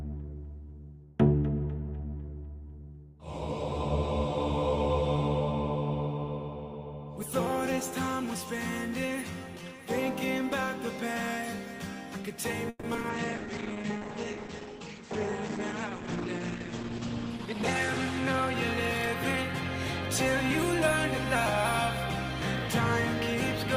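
From 12.69 to 13.05 s, repeated packet loss (robotic sound) sets in. Five gaps, the longest 140 ms, are patched by extending the previous sound, so about half the span is synthetic and 80 ms simply drops out. It sounds choppy, with pieces missing. On a spectrogram it shows as smeared, repeated frames broken by brief blank slivers.

At 13.11 s a call bitrate drop begins: Opus falls from 32 to 10 kbps, holding its lowest rate for nearly 4 s before recovering by 19.36 s. Coarser coding makes the sound rough and watery, and the audio band shrinks from 20 kHz to 8 kHz, visible as a hard ceiling cutting off the spectrogram's upper energy.

Overlapping this, from 13.38 to 14.00 s, a jitter buffer slow-down repeats single pitch periods to rebuild its reserve, adding 39 ms and playing at 95% speed. Sounds drag slightly at unchanged pitch. The waveform shows near-identical cycles repeated back to back.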